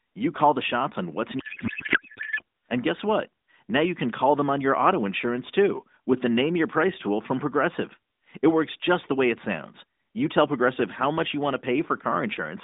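From 1.40 s to 2.42 s the speech gives way to garbled noise and warble that barely tracks it, a codec payload misread lasting about one second. Here the receiver is parsing AMR frames with their fields shifted, which fits octet-aligned packets being read as bandwidth-efficient. Each frame decodes as valid but with scrambled parameters. Either side of it, the narrowband AMR sound, consistent with the 12.2 kbps mode, is band-limited to roughly 200 Hz to 3.7 kHz.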